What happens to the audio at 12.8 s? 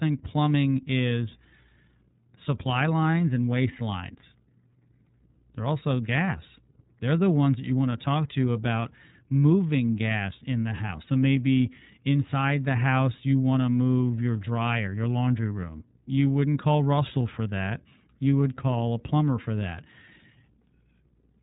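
The speech runs through the iLBC codec, here across the whole clip, coding each short frame independently, likely in its 30 ms, 13.33 kbps mode. Nothing above 3.8 kHz survives, leaving the speech narrow, slightly rough and synthetic.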